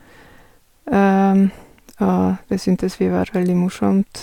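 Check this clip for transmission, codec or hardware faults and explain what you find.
Nothing to report on this speech clip: no transmission, codec or hardware problem is audible anywhere in it.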